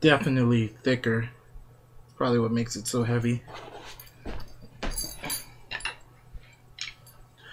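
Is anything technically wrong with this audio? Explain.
No, nothing technically wrong can be heard in this audio. There is no fault to point to at any moment in the clip.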